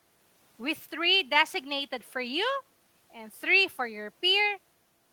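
A short speech recording with no technical faults to point to anywhere in the signal.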